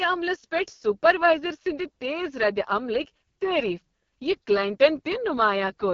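Right from the start and all the way through, the speech has that rough, raspy, buzzy quality you get from the AMR wideband (HD Voice) codec pushed to its bottom rate. The damage is heavy enough to point to about 6.6 kbit/s. At that rate the codec's pulse-driven model of the vocal tract can't keep up, so voicing comes out grainy. There's nothing above 7 kHz, and the top band is just shaped noise.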